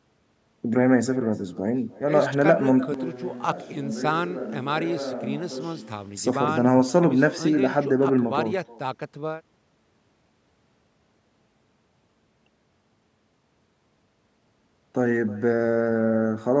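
Throughout the clip, echo with no canceller returns the speech as a thin copy about 21 dB down, trailing by roughly a third of a second. From 2.94 to 6.17 s the sound abruptly turns hollow and distant, about 10 dB quieter with more room noise, likely a switch to a distant microphone, before snapping back.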